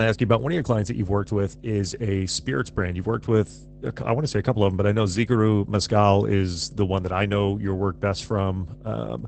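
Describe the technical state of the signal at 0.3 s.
At 0.3 s, mains hum sits under the speech, as it does through the whole clip. A ground loop or nearby transformer is leaking the power line into the signal. It is a steady 50 Hz drone, roughly 15 dB below the speech.

Opus voice compression also affects this moment and the entire clip. The speech has been squeezed through the SILK linear-prediction coder in wideband mode. Nothing is present above 8.6 kHz, and the coarse excitation coding sounds muffled, slightly hoarse and robotic, consistent with a low rate near 12 kbps.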